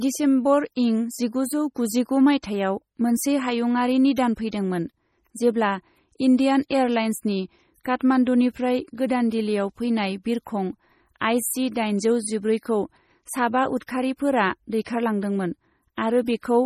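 Across the whole recording the speech carries heavy codec damage, likely from MP3 compression at a low bitrate around 32 kbps. The encoder removes everything above 16 kHz and discards weak spectral lines frame by frame, so the sound turns watery and swirling, with chirpy sibilants and blurred onsets.

At 14.84 s there is pre-echo. A sharp attack lands late in a transform block, and quantisation noise sized for that loud onset spreads back across the block, smearing about 19 ms earlier. A brief hiss precedes the onset, softening it.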